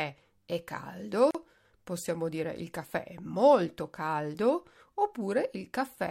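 At 1.31 s the speech stops dead for about 38 ms, then resumes at "possiamo dire il caffè". This is a gap at a join of encoded pieces. The audio was encoded in separate sections and joined without trimming. The encoder's start-up delay and the padding in its last frame were both left in. The codec smears the edges of the silence. The speech then continues exactly where it broke off.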